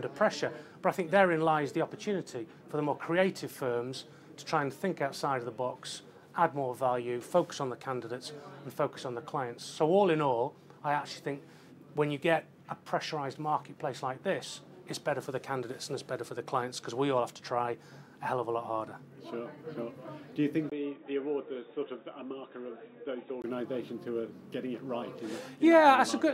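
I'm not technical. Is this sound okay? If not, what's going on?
No. From 20.70 to 23.44 s the sound goes dull and boxy, a bit quieter, with a faint new hiss after a tiny gap at the switch. That's likely an input switched to a poorer device, a lesser microphone that drops everything above 3.8 kHz.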